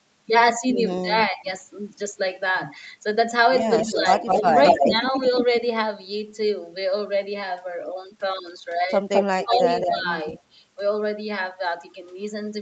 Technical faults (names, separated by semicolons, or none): speech suppressed in double talk; echo leak